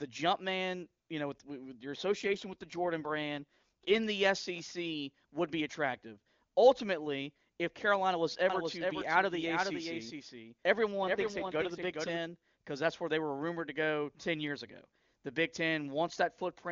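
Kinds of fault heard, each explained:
AMR rate drop: The speech turns rougher and more synthetic from 2.06 to 4.00 s and again from 11.01 to 11.91 s, as the AMR wideband link falls from 23.85 kbit/s, where it sounds clean, to 8.85 kbit/s, spending its bits on error protection instead. There is no gap or band change. On a spectrogram the band edge stays put, but harmonics smear and fine detail coarsens. The waveform shows no break.
Doubled audio track: From 8.50 to 12.18 s a second full-band copy of the speech runs about 0.4 s behind and about 5 dB quieter. It is most likely the same audio mixed in twice, through a slower capture path or an edit holding two copies out of step. It carries no decay or room colour and starts and stops abruptly. A spectrogram shows each syllable's pattern repeated at a fixed offset, and the waveform shows the same shapes duplicated.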